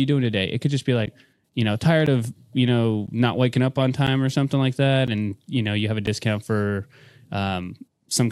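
Ticks every second from 1.06 s, after "could just be", to 6.07 s: periodic USB or driver dropouts silencing about 10 ms each.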